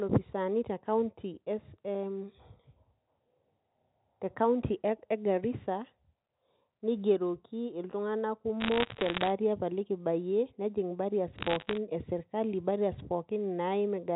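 Bit errors on a digital phone line occur from 8.60 to 9.30 s and again from 11.39 to 11.77 s, just before "e sirkali". Flipped bits in the G.711 mu-law stream corrupt individual samples at under one percent of bits, producing sharp ticks and crackle over the speech.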